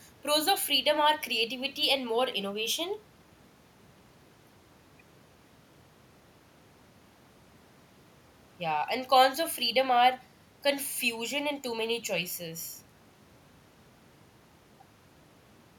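No technical faults can be heard anywhere in the speech, and the signal holds steady throughout.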